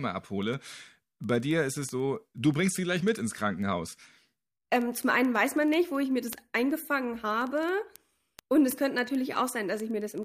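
From 0.10 s right through to 10.23 s there's a steady run of word clock ticks under the speech, about twenty a second, so roughly two hundred in all. The receiving device is running on its own clock instead of locking to the sender's digital link, and they're off by something like a few hundred ppm. Each time they slip, a single sample gets dropped or repeated, and that glitch is the sharp tick you hear at that even pace.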